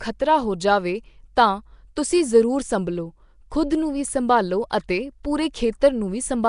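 Speech throughout carries a rough, hissy halo and smeared, underwater quality, with nothing above 10.6 kHz, likely Nellymoser compression, consistent with roughly 44 kbps Flash microphone coding.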